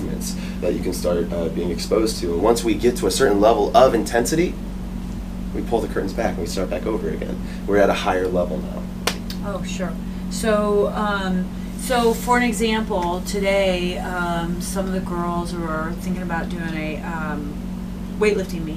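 No technical faults can be heard anywhere in the clip. Nothing in the audio points to a problem in how it was captured, processed or delivered.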